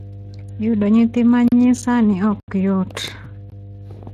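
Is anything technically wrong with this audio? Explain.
Yes, there are three distinct problems.

Mains hum runs through the whole clip: a steady 50 Hz tone about 20 dB below the speech, leaking in from a ground loop or nearby transformer. It sits at exactly the mains frequency and never drifts or follows the speech, which separates it from a room rumble or a low voice resonance.

Speex codec damage is plainly audible throughout. The speech sounds noisy and hoarse because this CELP codec has too few bits to reproduce the excitation faithfully. The degree of roughness fits a middle setting of roughly 22 kbps. Content stops around 15.3 kHz. The grainy, buzzy quality distinguishes it from the swirly, watery artefacts of MP3 or AAC.

Blocks of digital silence cut in at 1.48 to 1.52 s (40 ms), 2.40 to 2.48 s (80 ms) and 3.50 s (about 20 ms). These are stretches where the sound drops out entirely, most likely because the output buffer went unfilled. 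Each edge switches abruptly without a fade, so all three are heard as short holes rather than a natural pause in the speech.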